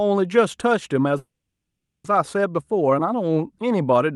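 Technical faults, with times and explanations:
1.17–2.06 s, call audio freeze: the speech trails into a brief fading buzz, then about 0.78 s of silence, and resumes exactly where it stopped, 0.87 s late. Likely held-up packets emptied the jitter buffer, so the receiver stretched the last sound.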